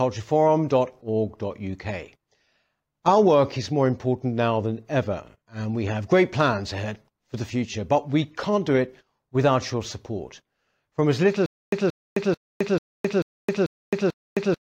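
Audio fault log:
11.46–14.61 s, stutter with silent gaps: just after "as little", a 177 ms fragment of speech repeats 7 times, each followed by about 264 ms of digital silence, a steady cycle every 441 ms that runs to the end. The playback likely stalled, replaying its last buffered chunk at each retry before running dry, so the speech that belonged there never arrives. On a waveform this shows as identical blocks separated by flat lines, and on a spectrogram as repeated vertical bands between empty columns.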